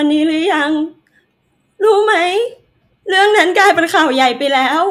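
Nothing to flag here: the speech comes through without any technical fault you could point to at any moment in the recording.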